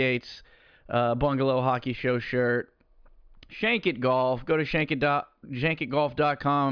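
No technical faults can be heard anywhere in the speech. At no point does the sound break up, drop out or change in a way that suggests something went wrong in the chain.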